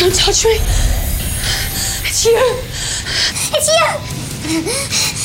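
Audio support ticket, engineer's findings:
Section at the wrong speed, 3.32 s to end of clip (5.24 s). Abrupt switch at 3.32 s: sound runs 1.28x fast, pitch up roughly four semitones. Likely cause: clock or sample-rate mismatch in the player or an edit stage for that segment. Distinct from a pitch-shift fault: timing compresses along with pitch, whereas a pitch shifter raises pitch and keeps the tempo.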